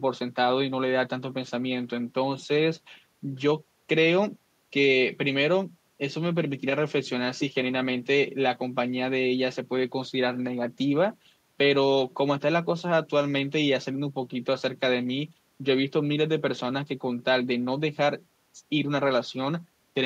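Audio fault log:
No fault was found in this speech clip.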